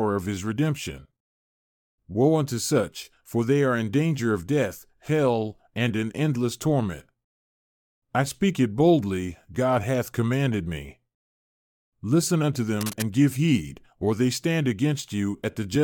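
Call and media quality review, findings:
Cable scratch noise, 12.81–13.02 s, just before "give heed or they": brief rustly crackle fairly close under the speech. Likely a worn cable or connector shifting, its contact resistance jumping around.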